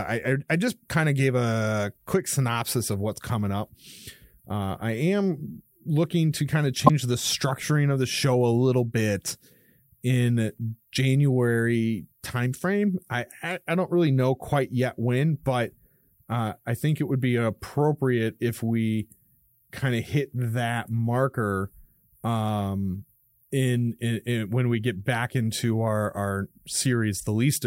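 Damaged data in a compressed stream shows up at 6.83 to 6.90 s, between "looking to kind of" and "the structuring of the". For about 70 ms the speech breaks up. Part of the encoded stream at that point is corrupt, so the decoder misreads the affected frames, loses its place in the bitstream and has to hunt for the next valid frame header before clean playback resumes.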